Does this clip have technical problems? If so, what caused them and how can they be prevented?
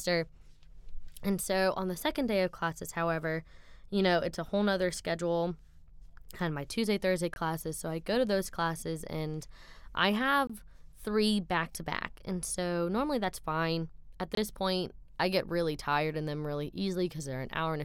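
Yes. Blocks of digital silence about 23 ms long cut the speech at 7.34, 10.47 and 14.35 s. The identical lengths fit 1024-sample buffers that were not filled in time. A larger buffer or higher audio-thread priority prevents this.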